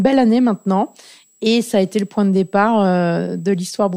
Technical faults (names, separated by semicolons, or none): switching supply whistle